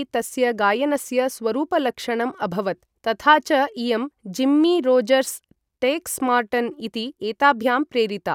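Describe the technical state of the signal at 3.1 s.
The signal at 3.1 s is intact, with no fault audible at that point in the speech.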